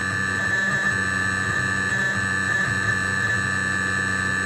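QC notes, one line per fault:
1.89–1.91 s, skip ahead: playback jumps forward here with no gap at all, and roughly 0.4 s of audio just isn't there. The sound on either side of the cut is butted straight together, so it lurches from one moment into a later one. That happens when a stretch gets thrown away, either lost on the way or dumped by an overflowing jitter buffer, while later audio was already queued, so playback picks up from the newer material.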